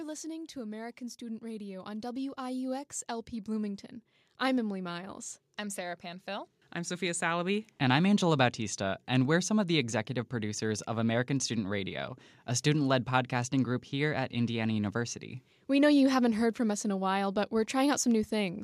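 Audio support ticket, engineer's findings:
Automatic gain rising, 0.52 to 7.72 s: speech, voice plus background, swells slowly by about 14 dB over roughly seven seconds. AGC stage judged the input too quiet and kept stepping gain up. Noise floor climbs with the voice.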